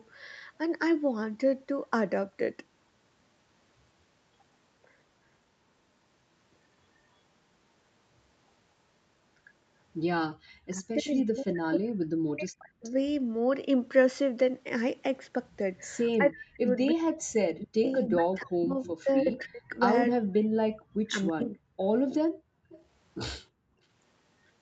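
Speech in which the room background drops out abruptly, by about 40 dB at 10.31–10.42 s and about 37 dB in patches across 22.29–23.79 s. This is background gated by the echo canceller, which clamped the microphone while the loudspeaker played. The talker's voice also sinks by roughly 40 dB in pieces during 10.7–12.86 s and 16.17–21.87 s. This is speech suppressed in double talk, likely because the canceller pulled everything down while both sides spoke. Delayed repeats of the voice, arriving about 0.32 s late, appear at 12.83–12.91 s, 16.12–16.16 s, 17.84–19.33 s and 22.11–22.84 s. They sit about 25, 40, 10 and 25 dB below the speech, strongest around 18 s. This is echo leak, likely from a loudspeaker endpoint whose canceller did not fully remove the returning sound.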